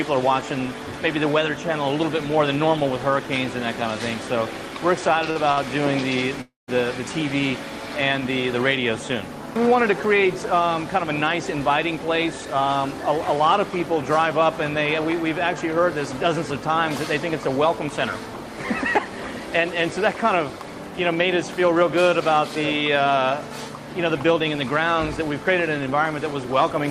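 Short stalls from a late packet come at 5.31 to 5.38 s and 5.52 to 5.59 s. The sound hangs for about 50 ms and then 56 ms with a faint buzzy smear. In each case a packet missed its playout slot and the jitter buffer emptied, so the receiver stretched the last fragment until the data turned up. Nothing is lost, but the playback delay grows by the same amount each time.

A call audio freeze follows at 6.41 to 6.70 s. The sound holds and decays for 266 ms, including 160 ms of silence, before resuming exactly where it stopped. This is likely a longer hold-up of packets in transit that starved the buffer, with the receiver filling the gap with fading concealment rather than dropping anything.

Jitter buffer speed-up appears at 11.42 to 12.46 s (about 104% speed), 19.01 to 19.48 s (about 109%) and 21.76 to 23.18 s (about 106%). The pitch stays put in all three spans, and the last two sound slightly rushed. 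Having accumulated extra queued audio, the receiver trimmed repeated pitch-period-sized slices to get back to its target latency. Roughly a twentieth of a second is removed in each of the first two spans and about a tenth of a second in the last.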